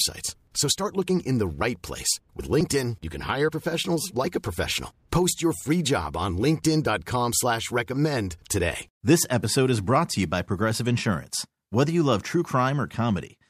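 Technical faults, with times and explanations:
Nothing technical stands out in this bit of speech; there's no fault to point to anywhere in it.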